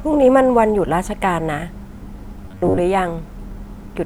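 From 2.46 to 2.80 s the speech turns into a rigid, metallic buzz near 94 Hz that still loosely tracks the words: robotic sound from repeated short buffers. Audio likely arrived too seldom, so roughly half this stretch is a segment about 11 ms long looped over skipped material.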